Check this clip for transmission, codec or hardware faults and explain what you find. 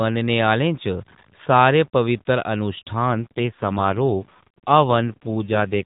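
There's one fault here, an AMR rate drop, from about 3.01 s to 5.84 s. Up to then the speech has the light roughness of narrowband AMR at a full rate around 12.2 kbps. At 3.01 s the codec gets pushed down to a much lower mode, which sounds like 5.9 kbps, and spends the freed bits protecting the stream on a weak link. The band stays the same and nothing drops out, but the voice turns buzzier and more synthetic right to the end.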